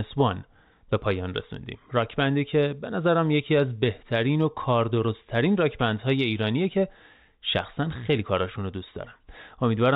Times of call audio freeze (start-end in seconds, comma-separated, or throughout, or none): none